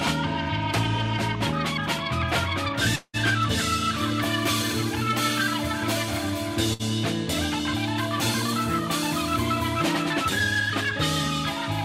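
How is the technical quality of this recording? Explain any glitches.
The recording has two transmission glitches, both places where audio failed to arrive.

From 2.95 to 3.16 s there is a long network dropout. The last sound is held and stretched into a buzz or hiss that fades over about 180 ms. Then comes about 50 ms of silence. The cause is likely a stretch where no packets reached the receiver, so it invented fill and then gave up. When sound returns, about 180 ms of the original is simply gone.

At 6.73 to 6.82 s there is a burst of packet loss. It is shorter, about 60 ms of audio lost in total. The receiver repeated the last sound and turned it down across roughly 58 ms, giving a brief held buzz or fading hiss. Playback then resumes ahead in time. The material from the gap is never heard.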